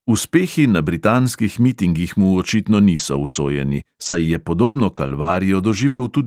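At 2.33 to 2.35 s, a lost packet rebuilt from error correction replaces about 20 ms of the speech. The original packet never arrived, but the following packet carried a reduced-bitrate duplicate of it, and the decoder played that duplicate. There is no gap. The rebuilt stretch sounds coarser and noisier than the audio around it, a brief grainy patch rather than a dropout.

From 2.95 to 6.01 s, repeated packet loss gives the speech a choppy, robotic character. Nine separate gaps open across this span, the longest 120 ms, and together they cover about 17 percent of it. Each gap is filled by extending the last received sound, 520 ms in total. Around 300 ms of that is reconstructed in a rough, approximate way, and the rapid succession of patched holes makes parts of the speech sound broken up and missing.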